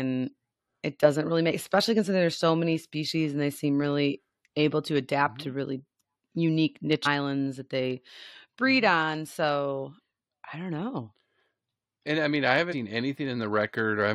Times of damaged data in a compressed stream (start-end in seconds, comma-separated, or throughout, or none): 7.05, 12.71-12.74